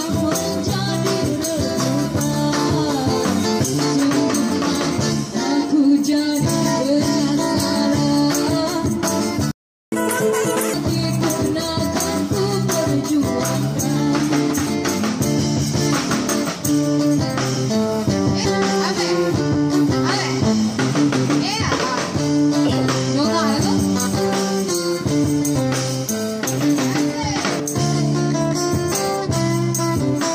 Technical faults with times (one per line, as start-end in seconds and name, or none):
9.51-9.92 playback stall
9.92-10.74 catch-up at higher speed
18.44 compressed frames skipped
25.54 compressed frames skipped
27.59 compressed frames skipped
28.91 compressed frames skipped